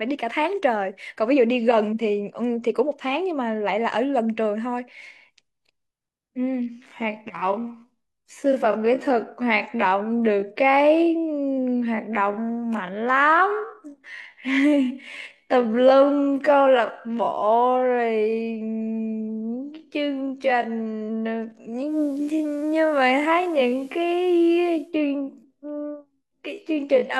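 From 6.58 s to the end, the speech abruptly slows to about half pace (0.535×) while its pitch holds steady, leaving it dragging. This is likely a time-stretched section, where software lengthened the audio by repeating short slices rather than resampling.

Between 21.83 s and 24.94 s, faint hiss rises, sitting roughly 35 dB under the speech, and the level shifts by about 1 dB. This is digital radio blending to analogue: the receiver lost its digital stream, cross-faded over 195 ms to the FM broadcast, then returned.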